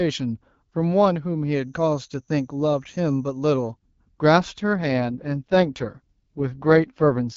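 A feedback whistle runs from 1.47 to 3.74 s: a thin, steady tone near 6.3 kHz sits about 20 dB below the speech, swelling and fading slowly in level. It is likely caused by a loudspeaker-to-microphone loop hovering just at the edge of feedback, where one high frequency keeps ringing without building into a full howl.

An AMR rate drop follows from 4.76 s to 7.36 s. Up to that point the AMR-WB wideband coding is light and clear, consistent with the 12.65 kbit/s mode. Then the speech turns rougher and more synthetic, with no gap and no loss of bandwidth. The sound points to the codec being pushed down to around 6.6 kbit/s, as a network does on a weak radio link, giving bits to error protection rather than to the speech.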